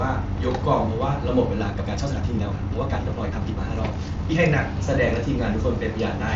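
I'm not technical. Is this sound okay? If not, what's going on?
No. From 1.59 to 4.39 s the speech suddenly runs about 1.58 times faster while the pitch stays the same, so it sounds rushed. This is a time-stretched section, likely from software squeezing that stretch to fit a shorter length by dropping short pieces.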